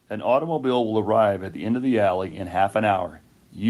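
From 0.08 s to 2.43 s there is an automatic gain rising: the gain control judged the incoming speech too quiet and pushed its gain up by about 5 dB, stepping it gradually over more than two seconds. Voice and background noise swell together at the same rate. That shared, slow climb separates it from compressor pumping, which reacts quickly to each loud syllable, and from someone simply moving closer, which would lift the voice but not the room.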